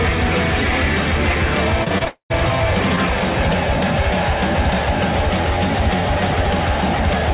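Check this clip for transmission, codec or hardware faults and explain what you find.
Two network faults sit back to back around the two-second mark, heard through a telephone-band path that carries nothing above 4 kHz, as expected for a G.711 A-law call.

Repeated packet loss (robotic sound), 1.84 to 2.08 s: several short holes, the longest about 23 ms, leave roughly a third of the stretch concealed. Each hole is filled by extending the preceding waveform, so the sound turns choppy rather than cutting out. Unlike a single long loss, the audio keeps returning between patches, giving a rapid stutter.

Long network dropout, 2.08 to 2.32 s: about 0.22 s of audio never plays. The sound first continues as a fading buzz or hiss, then sinks to silence for about 0.11 s before the signal resumes with that section missing. The likely cause is a sustained gap in delivery rather than scattered packet loss. 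What separates it from the choppy stretch just before is one continuous decay into quiet, not repeated short patches.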